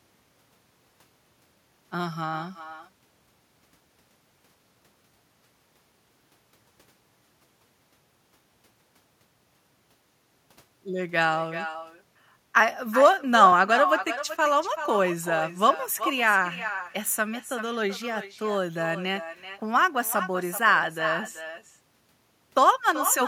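Echo with no canceller runs throughout this speech recording: every phrase returns roughly 0.4 s later as a quieter, thinner copy about 10 dB down. The far end's loudspeaker is feeding its microphone, and nothing strips that return before it travels back across the network.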